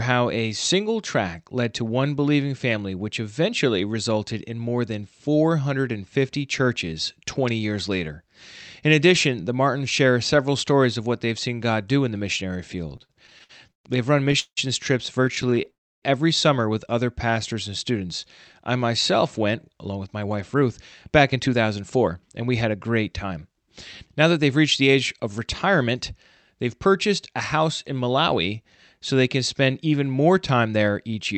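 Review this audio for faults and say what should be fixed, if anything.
Repeated stalls (stutter) occur from 12.89 to 14.59 s, just after "do in the missionary", and again from 15.25 to 15.68 s. Packets arrived late, so the jitter buffer kept running empty and the receiver extended the last sound to bridge each hole. The first stretch has 12 gaps, the longest 175 ms, covering about 28% of the span. The second has 9 brief gaps of up to 16 ms. Nothing is lost, but the sound drags and stutters. Prevent this by fixing network jitter at its source and letting the buffer hold a larger reserve.

A call audio freeze follows from 15.70 to 16.04 s. For about 0.32 s the audio stops, nearly all of it silence. The likely cause is packets held up in transit, leaving the buffer empty. Playback then resumes where it stopped, so a gap is inserted and the delay grows by 322 ms. Prevent this by tracing and removing the transit hold-ups, such as congestion or route changes.

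A jitter buffer slow-down runs from 17.25 to 17.92 s, after "every summer with other". To rebuild a depleted reserve, the receiver repeated pitch periods and adds 53 ms. Playback runs at 93% speed with the pitch unchanged, so sounds are slightly drawn out. Prevent this by keeping packet arrival steady so the buffer never drains that low.

A jitter buffer speed-up spans 19.69 to 26.80 s, from "I myself went" up to "purchased a house in". The buffer held more than its target, so the receiver cut short pitch-period pieces, roughly 0.4 s in total. Playback runs at 106% speed with the pitch unchanged and sounds hurried. Prevent this by avoiding bursty packet delivery so excess delay doesn't build up.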